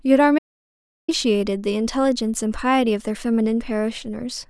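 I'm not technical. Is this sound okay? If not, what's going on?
No. From 0.39 to 1.08 seconds the speech cuts out completely: an audio dropout to silence, losing about 0.7 seconds. Unlike a natural pause, even the faint room background vanishes, which points to the input likely being briefly disconnected or muted.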